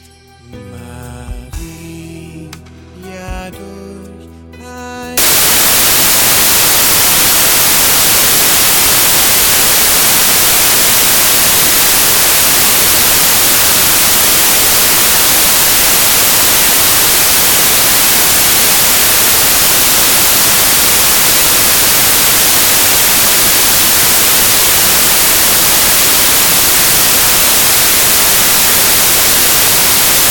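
From 5.18 s to the end at 30.30 s, the audio turns into samples built from the wrong bytes. Each sample's bytes are assembled in the wrong order or alignment, so the rapidly changing low bits dominate, producing loud, harsh broadband noise.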